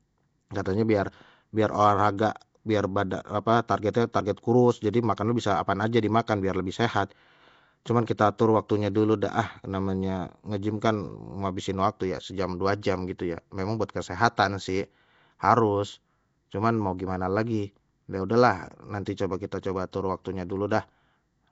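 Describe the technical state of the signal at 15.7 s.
At 15.7 s you're hearing the same Nellymoser compression that runs through the whole clip. The speech has a rough, hissy halo and a smeared, underwater feel, with nothing above about 7.7 kHz. That's likely a low-rate block codec filling starved bands with noise, consistent with around 32 kbps.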